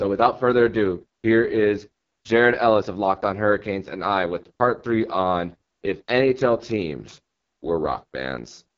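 Rough, raspy speech runs through the whole clip, with no content above about 7.3 kHz. The heavy damage points to the AMR wideband (HD Voice) codec at its lowest mode, around 6.6 kbit/s, where too few bits remain to model the voice cleanly.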